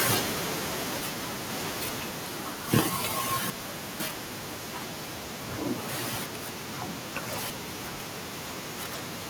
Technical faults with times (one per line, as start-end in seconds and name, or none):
0.05-2.76 automatic gain falling
1.00-2.00 chunks out of order
3.50-4.50 chunks out of order
6.50-8.00 chunks out of order